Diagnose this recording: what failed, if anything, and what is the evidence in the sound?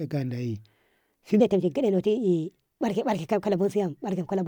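From 1.40 s to the end, the speech jumps to a faster, higher rendering: a section at the wrong speed, running at 1.22 times normal, with pitch raised by about three semitones. Tempo and pitch shift together at one instant, with no gradual drift, which points to resampling or playback rather than the talker. The likely cause is this segment being clocked or rate-converted at the wrong sample rate, so it plays back compressed in time.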